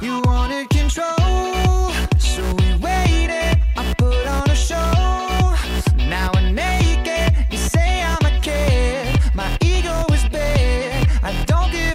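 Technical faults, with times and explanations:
No technical faults can be heard anywhere in the audio.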